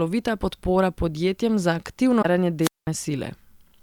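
A short speech recording with two faults close together. From 2.21 to 2.25 s, damaged data in the compressed stream makes a brief glitch as the decoder loses sync. At 2.61 s, a wireless microphone squelch dropout begins. Hiss rises, then the receiver mutes for about 198 ms before the sound returns by 2.87 s.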